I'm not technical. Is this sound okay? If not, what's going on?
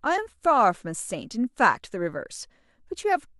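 Yes, this sound is okay; nothing is going wrong in it.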